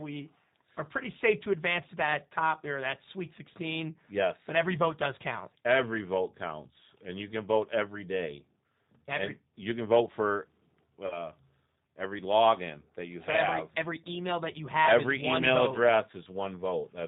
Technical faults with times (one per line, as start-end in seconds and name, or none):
0.00-17.08 G.729 codec
11.07-11.29 VoIP packet loss concealed by the speech codec